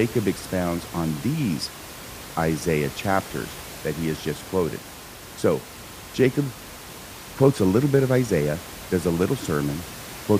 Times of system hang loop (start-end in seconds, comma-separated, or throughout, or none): none